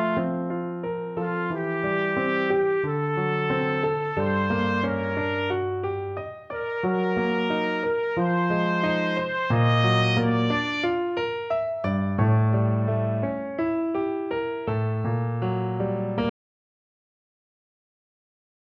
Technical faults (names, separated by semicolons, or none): audio dropout to silence